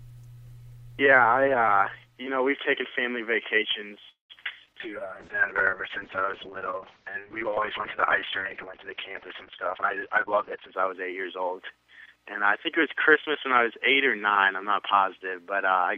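From 4.09 to 4.33 s the sound trails off into a fading continuation, then about 0.14 s of silence before resuming. This is a call audio freeze, likely from delayed packets draining the jitter buffer, which inserted a gap but lost nothing.

Two quick forward jumps follow, at 4.66 to 4.70 s and 4.73 to 4.77 s. These are skip aheads, where roughly 70 ms and then about 100 ms of audio were dropped and the two sides spliced together.

From 4.83 s the audio turns rough and muffled, clearing by 10.81 s. This is a call bitrate drop from 128 to 6 kbps, which held for 5.87 s and narrowed the bandwidth from 20 kHz to 6 kHz.

Between 4.84 and 6.51 s the audio drags at 90% speed with unchanged pitch. A jitter buffer slow-down repeated pitch periods, adding 169 ms to rebuild its reserve.

From 9.71 to 11.52 s the audio sounds hurried at 112% speed, still at the same pitch. A jitter buffer speed-up trimmed roughly a fifth of a second to cut excess delay.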